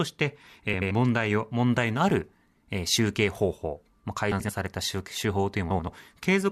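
A brief garbled flutter occurs three times in this speech: 0.73 to 0.91 s, 4.31 to 4.50 s, and 5.70 to 5.88 s. Each is a case of frames out of order. Two adjacent blocks of about 85.3 ms, consistent with runs of four frames each, were decoded with their order reversed, so the later block plays before the earlier one. No audio is lost, only scrambled.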